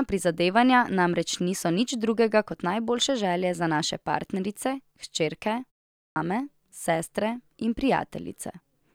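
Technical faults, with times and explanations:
5.97–6.16 s, clipped start after a pause: after a pause of 0.34 s, the output path appears to have gone idle and needed time to wake or relock, so the first 190 ms of the returning speech never reaches the listener and the phrase begins abruptly, missing its opening sounds. On a waveform, the flat silence gives way to a signal already at speaking level with no rising onset. On a spectrogram, energy appears as a hard vertical edge at 6.16 s instead of building up gradually.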